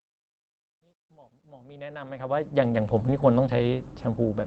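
A speech recording that fades in from the start and reaches full level at about 2.86 s. The fade has truncation distortion from 0.0 to 2.86 s, and it is worst from 0.0 to 1.68 s. There, the quiet opening sounds gritty and grainy. The cause is a gain stage that kept too few bits and added no dither. At low level, the waveform collapses into a few coarse steps. The behaviour fits a 12-bit stage. Later, from 3.07 to 3.13 s, there is a lost packet rebuilt from error correction. Nothing drops out, but about 40 ms sounds rougher and noisier than its surroundings. This fits two lost packets whose low-quality copies were decoded in their place. The audio came through an Opus call path, with highs cut off above 8 kHz.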